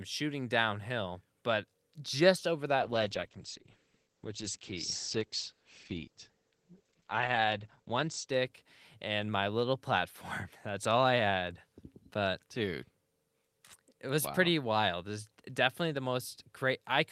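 Speech turns rough and muffled from 2.81 s, just after "downhill but just over", until 9.59 s, its top end cut to 8 kHz from 20 kHz. This is a call bitrate drop; the sound points to the encoder falling from about 40 to 10 kbps, coarsest for 4.7 s.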